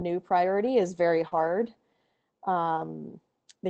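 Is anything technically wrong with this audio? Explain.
Yes, the speech has two brief dropout problems, each occurring twice.

Short concealed packet loss appears as a quick smear or wobble from 1.27 to 1.33 s and again from 2.75 to 2.79 s. About 40 ms and then 20 ms of audio failed to reach the decoder in time. The receiver covered each hole by extending the preceding sound, carrying its pitch forward or filling with shaped noise, before blending back into the real signal.

A lost packet rebuilt from error correction follows each concealment. From 1.31 to 1.49 s, about 100 ms of the speech turns rougher and noisier, consistent with five 20 ms packets replaced by low-bitrate copies. A shorter rough patch of 20 ms appears at 2.77 to 2.79 s. Opus carries a coarse backup of each packet inside the next one, so the decoder played those copies instead of leaving a gap. Across the whole clip, the call codec limits the audio to about 8 kHz.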